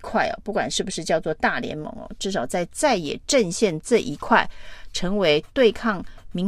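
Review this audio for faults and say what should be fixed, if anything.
Nothing needs fixing, as the signal shows no technical faults at any point.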